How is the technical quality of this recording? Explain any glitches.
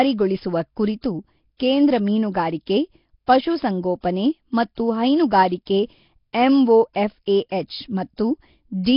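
Heavy codec damage runs through the whole recording. The speech carries a rough, hissy halo and a smeared, underwater quality, with nothing above 5.3 kHz. The likely cause is Nellymoser compression, the old Flash microphone codec, at a rate pointing to around 22 kbps. It codes short blocks with very few bits, so weak bands get no bits and are refilled with noise.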